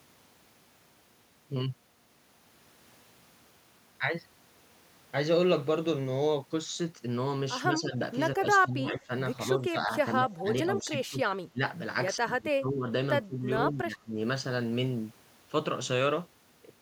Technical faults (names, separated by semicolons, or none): speech suppressed in double talk